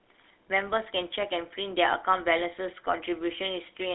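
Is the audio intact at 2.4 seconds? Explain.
No. At 2.4 seconds, as throughout the clip, the speech has a buzzy, gravelly roughness and sounds boxed in, with nothing below about 300 Hz or above about 3.7 kHz. This is the GSM full-rate codec. It rebuilds speech from a vocal-tract filter excited by regularly spaced pulses, keeping only every third excitation sample, which fits a 13 kbps stream. That coarse excitation produces the grainy buzz.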